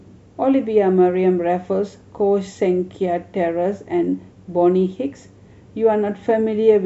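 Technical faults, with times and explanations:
Nothing stood out as a technical problem on listening to this speech recording.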